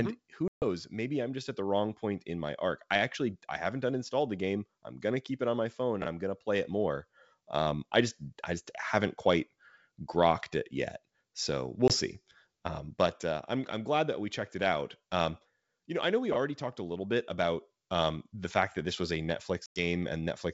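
At 0.48 s, just before "maybe I'm just at", a 140 ms hard-edged silence cuts in, fitting roughly seven lost packets. This is packet loss on an ADPCM call: the decoder's predictor and step size lose track of the sender, so the speech comes back slightly distorted, then settles within tens of milliseconds. Shorter holes follow at 11.88 s (20 ms, about one packet) and 19.66 s (100 ms) after "that this was a".

At 6.02 s, between "it on my phone" and "I'm going to play", chunks arrive out of order: one 20 ms chunk plays one slot late. Nothing goes silent, unlike the losses. Instead, three hard joins make a brief jumbled stutter.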